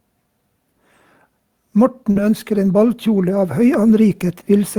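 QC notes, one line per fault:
1.59 s to the end, automatic gain rising: the gain control decided the input was too quiet and kept nudging it up, so voice and background swell together.
2.11 to 2.18 s, short concealed packet loss: about 40 ms never arrived in time, so the receiver stretched the previous sound to cover the gap, leaving a brief smeared wobble.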